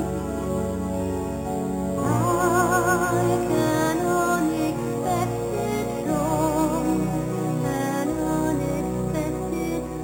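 Imaging from sample-and-hold upsampling runs throughout: unsmoothed repeated samples mirror the spectrum into 4 to 8 kHz, about 18 dB down, heard as metallic fizz.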